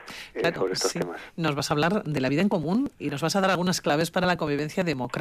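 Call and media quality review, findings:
Regular ticking throughout, a small pop every 0.115 s (about 8.7 per second), from 0.10 s to 5.16 s, about fifty in all, heard only over signal. Periodic USB or driver dropouts: a background task stalling the USB bus or audio driver on a fixed schedule. Around 10 ms skipped outright each time, not silence-filled, so the waveform jumps and clicks at each splice.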